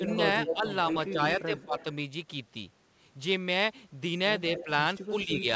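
From 0.0 to 1.77 s the speech keeps dipping and breaking up, with about half a second lost in total and the deepest drops near 15 dB. This is speech suppressed in double talk, likely because the echo canceller, faced with both sides talking at once, turned down the near talker along with the echo. Overlapping that, from 0.09 to 1.84 s, a second copy of the speech trails the first by 211 ms, only a little quieter than the original. That is an echo leak: likely loudspeaker sound the canceller failed to remove was sent back. The two differ plainly. Suppression takes sound away, while the leak adds a late duplicate.

The pattern returns near the end. From 4.57 to 5.07 s the delayed copy comes back at the same 211 ms lag but weaker, around 10 dB under the speech. From 4.64 s to the end the speech sinks again in a shallower dip of about 5 dB. Throughout, nothing sounds above 8 kHz, which fits the G.722 call path.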